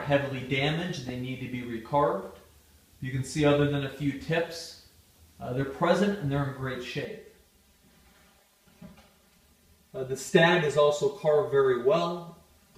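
From 7.05 s onward, channel delay (comb filtering): one channel lags about 5 ms before the mono sum, notching from about 100 Hz upward and sounding hollow.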